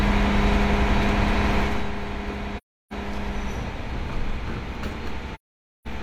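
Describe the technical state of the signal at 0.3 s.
At 0.3 s the signal is intact, with no audible fault.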